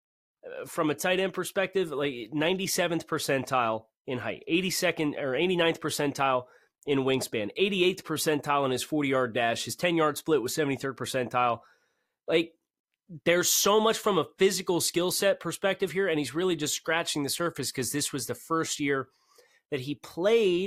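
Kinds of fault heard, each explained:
No technical faults heard.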